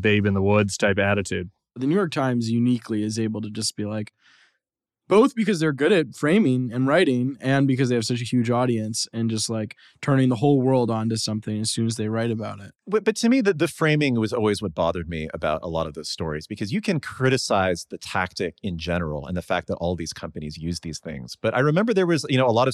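No technical faults can be heard anywhere in the speech recording, which holds steady in level and continuity throughout.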